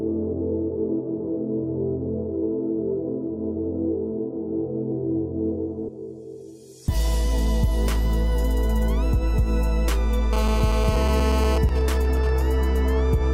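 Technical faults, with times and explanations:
10.33–11.58 s: GSM phone buzz. A 2G handset close to the recording chain is in an active call, transmitting radio bursts at about 217 Hz, and some stage in the audio path rectifies those pulses into the signal. The result is a hard, raspy buzz at 217 Hz with a dense stack of harmonics, sitting only about 5 dB below the programme and unrelated to it. Because the phone is transmitting continuously during the call, the buzz holds steady for the full 1.25 s.
11.69–12.42 s: GSM signalling bursts. Straight after the steady buzz, the same handset drops to intermittent transmission, consistent with its user falling silent during the call, so only short groups of radio bursts are sent. The audio circuit rectifies each group, giving even ticks with a longer 217 Hz buzz twice a second rather than a continuous tone. It is clearly quieter than the preceding buzz, roughly 15 dB below the programme, and lasts about 0.7 s.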